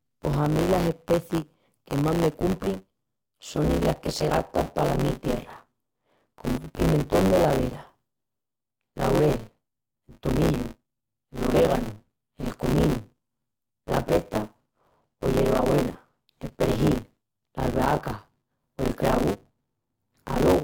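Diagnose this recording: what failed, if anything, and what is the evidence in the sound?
Buffer tearing at the driver or buffer stage, throughout the speech. A robotic buzz at 100 Hz rides on the voice and stops in pauses. The writer and reader cross each period, which fits a 10 ms buffer. About half of each holds audio roughly 20 ms old.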